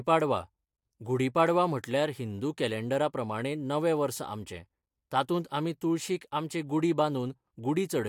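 No technical faults turn up anywhere in this speech clip, so there's nothing here that needs tracking down or explaining.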